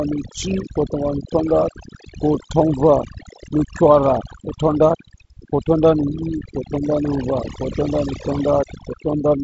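Throughout the speech, overdone noise removal is at work. The reduction was set too strong. Bands near the noise estimate are pulled far down or cut. Quiet speech detail goes too. The background drops and breaks up into twinkling specks. The G.722 wideband path adds a light upper-band hiss, with nothing above 7.7 kHz.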